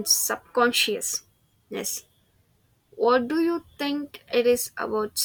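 Nothing in the speech stood out as a technical fault on listening.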